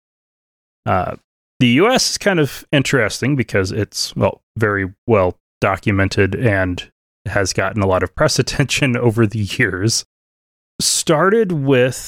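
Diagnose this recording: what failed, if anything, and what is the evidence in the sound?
No fault is audible anywhere.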